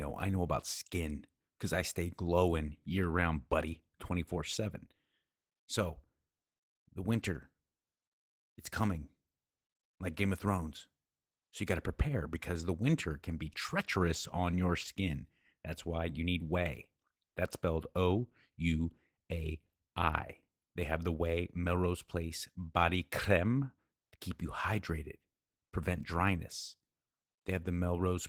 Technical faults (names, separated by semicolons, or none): Opus voice compression